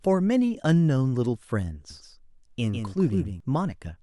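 A second copy of the speech was likely captured by a slower path, producing a doubled audio track from 1.90 to 3.40 s. The copy trails by roughly 150 ms, about 5 dB quieter, as a dry, full-band echo that switches on and off abruptly.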